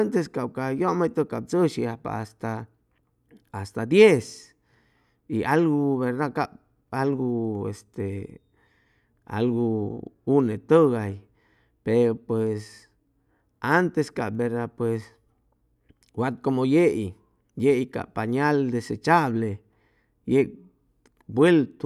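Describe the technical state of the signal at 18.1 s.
At 18.1 s the audio is intact, with no dropout, distortion or other fault at that point.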